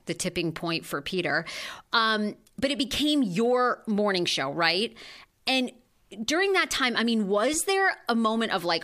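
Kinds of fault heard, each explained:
No fault of any kind can be heard in the speech. The recording carries no audible technical problem at any point.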